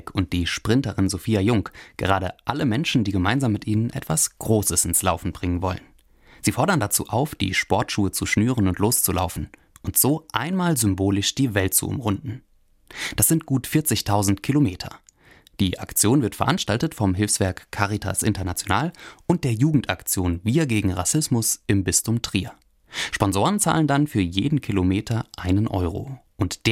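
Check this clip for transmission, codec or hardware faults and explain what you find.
Nothing audible points to a transmission, codec or hardware fault anywhere in the speech.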